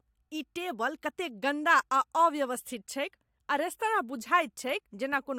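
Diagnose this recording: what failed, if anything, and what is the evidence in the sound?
Nothing failed; no fault is audible anywhere.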